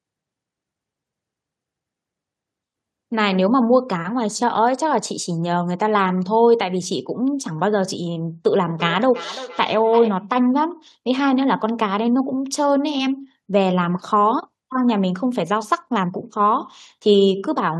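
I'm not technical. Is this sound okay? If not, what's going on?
No, not quite. From about 8.55 to 10.34 seconds there's a feedback echo between two devices: the speech comes back around roughly every third of a second, much quieter than the original and sounding thinner. It happens when two devices in the same room are on one call. One plays the other's audio, that microphone hears it again, and neither echo canceller catches sound coming from the other device.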